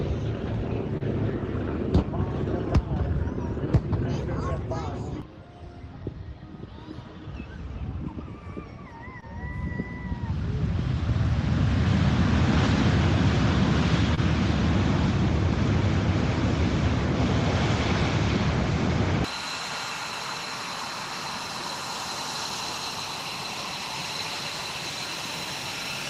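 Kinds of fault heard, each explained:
Short concealed packet loss: three brief gaps, near 0.97, 9.2 and 14.15 s, where about 20 ms of audio never arrived in time and the receiver patched it by extending the preceding sound, so you get a quick smear or tiny wobble rather than silence.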